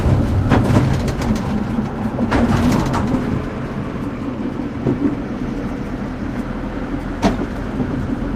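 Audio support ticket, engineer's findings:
Findings: no faults found in the audio, no component implicated.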